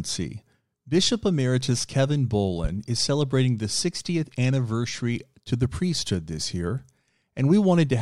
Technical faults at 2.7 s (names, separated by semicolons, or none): loud pop